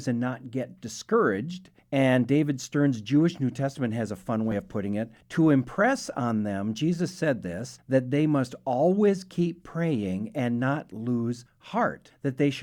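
At 4.51 s, between "has a fun" and "of putting it", the speech jumps ahead. This is compressed frames skipped. Roughly 20 ms of audio never plays, which fits a couple of 10 ms frames being lost or rejected.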